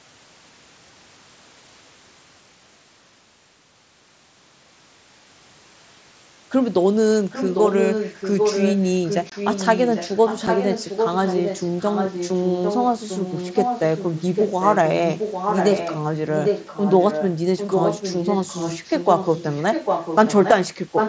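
A speech clip whose far end was likely playing the call over a loudspeaker, with an echo canceller that failed to remove what its microphone picked up, so that sound was sent back into the call. From 7.3 to 16.0 s, from 16.36 to 20.51 s, and again from 20.95 s to the very end, a second copy of the speech trails the original by about 0.8 s. It sits a little below the direct speech for most of that time. In the final fraction of a second it rises to roughly the same level, so the repeated speech competes with the live speech instead of hanging behind it. Separately, the Bluetooth headset link dropped voice packets without concealing them, and silence or an idle pattern took their place. At 9.30 to 9.32 s a 22.5 ms hole opens in the speech, long enough to register as a brief chop with hard edges. At 10.47 s a single 7.5 ms gap leaves a short break. Both gaps cut abruptly into the wideband mSBC audio, which carries the speech up to 8 kHz.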